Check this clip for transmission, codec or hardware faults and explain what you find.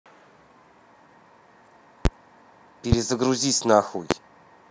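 Three loud pops break into the speech, at 2.05 to 2.08 s, 2.92 to 2.95 s and 4.11 to 4.14 s. Each is a single sharp thump lasting about 30 ms, roughly 20 dB above the speech at the first and last and nearer 15 dB at the middle one, with the speech carrying on underneath. The likely cause is a voltage step or pulse from a plug, switch, static or driver glitch, shaped by the circuitry after it. On a waveform each shows as a tall, narrow spike; on a spectrogram, as a thin vertical stripe across all frequencies.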